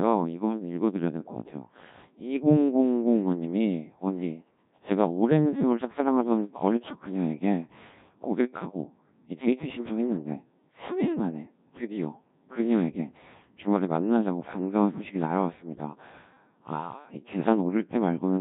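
The speech has been carried through the Codec 2 vocoder for its whole length, at a heavily damaging setting that fits a rate near 1.3 kbit/s. Only pitch, voicing, energy and a spectral envelope survive, so the decoder rebuilds the voice from sine waves, leaving it robotic and buzzy.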